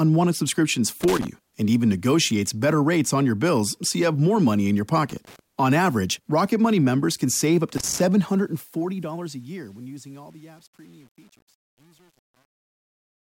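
Loose connector crackle bursts at 1.01–1.27 s, 5.09–5.39 s and 7.77–8.00 s: an intermittent contact chops the signal into irregular scratchy pops, unlike steady hiss or a single click. From 8.17 s, as the audio fades out toward the end, truncation distortion on a fade sets in, worst from 9.09 s: too few bits, consistent with about 8-bit resolution without dither, turn the quiet tail gritty rather than smoothly noisy.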